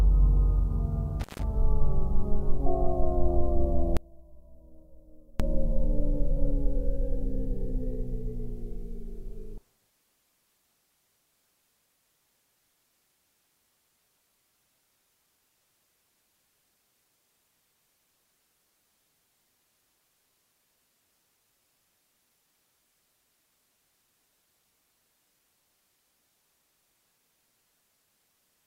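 At 1.20 s an intermittent contact opens the signal path for about 156 ms, ending by 1.43 s. The sound drops out abruptly with crackle at the break and again as the connection remakes, and faint hiss fills the gap. Unlike a digital dropout, which cuts to clean silence with sharp but tidy edges, this break is rough and noisy at both ends.

From 3.97 s to 5.40 s the level falls by about 27 dB and what remains is a faint residue of the original rather than silence. The likely cause is one channel inverted, so that the two sides cancel when combined to mono and only their small differences survive. A gain drop would keep the sound's full body at a lower level. A mute or dropout would leave nothing. Here the audio stays audible but loses its centre.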